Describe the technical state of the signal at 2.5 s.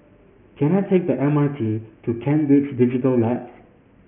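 Aliasing is present at 2.5 s, as it is across the whole clip. The speech sounds like it was resampled from 16 kHz to 6 kHz with no anti-alias filter, so content above 3 kHz folds back as gritty, metallic tones roughly 25 dB below the speech.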